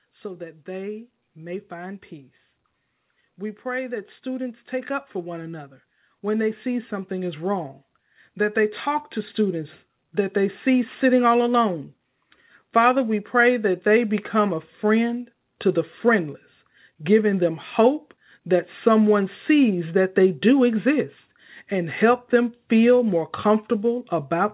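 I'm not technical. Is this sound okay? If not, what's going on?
No. The automatic gain, the part of the system that sets how loud the input is, decided the recording was too quiet and kept turning it up. From about 0.22 to 10.98 seconds, the speech and the background noise behind it grow steadily louder together, like a volume knob slowly being raised. By the end of that stretch, everything sounds noticeably louder than at the start. The call connection itself keeps the sound muffled, with nothing above 4 kHz.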